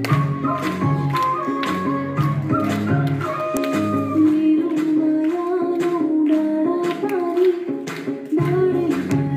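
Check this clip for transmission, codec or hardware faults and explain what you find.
One fault is audible. At 3.57 s there is an uninitialised buffer. A tiny block was played before any audio was written into it. Leftover memory came out as samples. It sounds like a sharp, loud click of digital noise, about 0.73 ms long, which fits a 32-sample block.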